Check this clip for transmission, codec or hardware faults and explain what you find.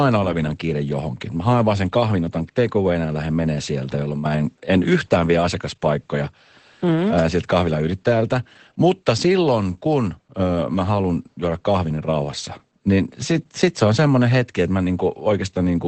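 One codec fault runs through the whole speech clip. Throughout, the speech sounds muffled, hoarse and slightly robotic, with nothing above 8.4 kHz. This is Opus voice compression at a low rate, fitting about 12 kbps, with its SILK predictive coder quantising the excitation coarsely.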